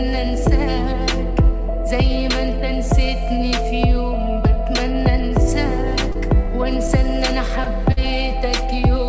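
Short stalls from a late packet occur at 6.12, 7.64 and 7.92 s: each time a packet arrived late, the jitter buffer ran dry and the last sound was held for about 30, 19 and 50 ms, then resumed without loss. The audio's ceiling near 8 kHz fits a wideband call codec such as G.722.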